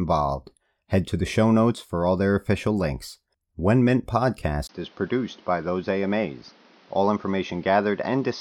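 Input switched to a poorer device at 4.67 s, lasting to the end: after a 20 ms gap the speech turns dull and slightly quieter, with nothing above 6.4 kHz and new background noise roughly 30 dB down, likely from a narrower-band microphone taking over.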